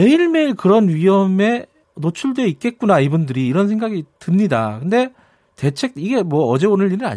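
No technical faults occur at any point in this speech, so there is nothing to place in time order.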